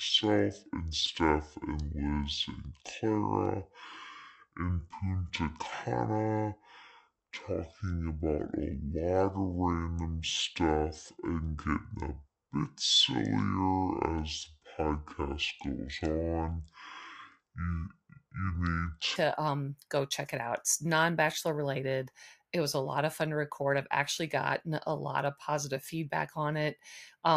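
From the start up to about 19.16 s, the speech runs at roughly half speed, 0.53 times the original, so it's a section at the wrong speed. Pitch and tempo drop together, about ten semitones down, giving that deep, dragging quality. It snaps back to normal right as "um go check it" comes in. The likely cause is that stretch being played back against the wrong clock.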